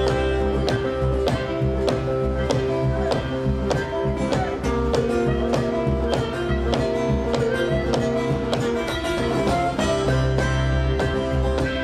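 A block size mismatch (truncated) runs throughout the clip. One stage hands over blocks that fit a 1024-sample size, and the next stage takes less than that from each, so the tail of every block is discarded. Each cut leaves a small discontinuity, and these repeat into a steady buzz at 43.1 Hz, the block rate. The playback speed stays at 1.0, so the sound keeps its original pace and pitch while the buzz sits underneath it.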